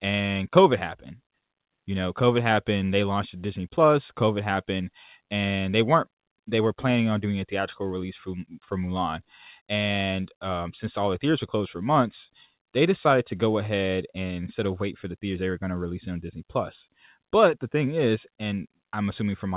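Speech, with no technical faults to report.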